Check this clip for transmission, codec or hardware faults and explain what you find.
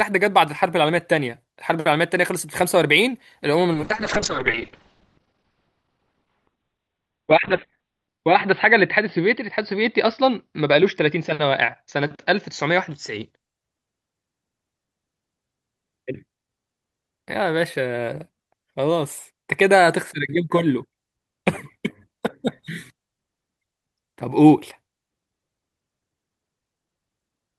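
There's one fault here, a call bitrate drop running from about 3.74 s to 13.6 s. The link's bandwidth estimate sagged, so the encoder got squeezed from what sounds like roughly 48 kbps down to around 9 kbps and started coding coarsely. It also narrowed the audio band from about 20 kHz to 4 kHz, so the speech goes muffled and a bit rough and watery, bottoming out for about 4.3 s before the detail comes back.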